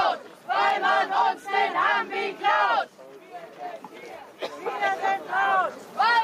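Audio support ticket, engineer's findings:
Gain pumping, whole clip: level swings about 5 dB, loud and soft parts squashed closer in level; level rises smoothly rather than gating off. Likely input gain set too high, with a fast limiter clamping peaks.

Repeated buffer at 0.70 s: brief click-like buzz. The same 5 ms chunk plays twice with a hard join, so there is no silent gap as in a dropout. Output device underrun, replaying the last buffer.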